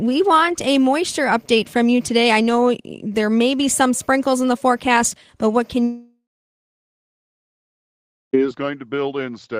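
A speech clip in which, right after "forecast but what can" at 5.83 s, the sound smears into a buzzy, fading continuation of the last syllable for a few tenths of a second and then falls to silence for about 2.1 s. Speech resumes at 8.35 s mid-flow, with the intervening stretch simply gone. This is likely a long network dropout. Roughly 2.5 s of audio never arrived, so the receiver stretched the final sound to cover the gap before giving up and going quiet.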